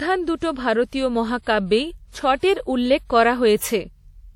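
Throughout the speech, the damage points to a lossy transform coder, likely WMA compression from an early encoder at a rate that fits about 48 kbps. Long transform blocks smear quantisation noise over tens of milliseconds around each syllable, and weak spectral lines are dropped. The result is plainly audible: a ringing, washy edge on the speech and a hiss that swells and fades with the signal, with nothing above 20 kHz.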